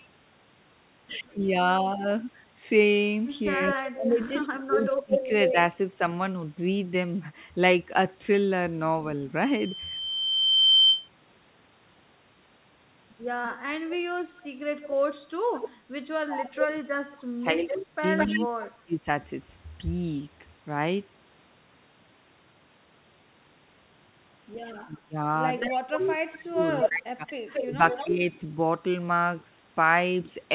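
At 1.29 to 1.34 s a faint delayed copy of the speech, about 35 dB below it and roughly 193 ms late, slips through. This is an echo leak, likely from a far-end loudspeaker whose echo canceller left residue that was sent back. From 3.53 to 5.52 s the echo leak returns at about the same level as the speech itself, delayed about 197 ms.

Overlapping that, from 3.94 to 5.56 s, the talker's speech is suppressed in double talk. The canceller, likely unable to separate near-end speech from echo, attenuates both, pulling the speech down by as much as about 20 dB for about a second in total.

At 13.44 to 15.69 s the echo leak recurs about 10 dB down, delayed about 210 ms. Speech suppression in double talk follows from 16.1 to 19.07 s, with dips reaching about 30 dB and about two seconds affected in all. Within it, from 17.67 to 18.4 s, the echo leaks through again at about 5 dB below the speech, delayed about 214 ms.

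The longest overlap runs from 24.74 to 28.11 s. An echo leak about 5 dB down and about 225 ms late sits under the speech, which is itself suppressed in double talk from 24.83 to 28.23 s, with drops of up to about 25 dB and about two seconds affected.

Inside that stretch, at 26.89 to 26.92 s, a short concealed packet loss occurs. About 20 ms of audio never reached the decoder, and the receiver filled roughly 16 ms by extending the preceding sound before blending back. This is heard as a brief smear or wobble in the 4 kHz band-limited G.711 call audio.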